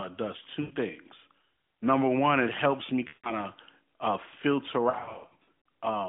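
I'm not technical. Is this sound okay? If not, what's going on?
No. The clip has lost AMR speech frames: pieces of the mobile call's signal arrived damaged, so the phone briefly stretched the last good sound and let it fade instead of playing silence. You hear this at about 0.62 to 0.73 s, at 3.08 to 3.33 s between "one it helps me" and "of uh filter", and, after "of uh filter", as a broken, stuttering patch from about 4.9 to 5.48 s. Unlike a clean dropout, the sound smears and fades rather than cutting off sharply. The narrow, phone-like tone comes from the mobile codec, which is working normally.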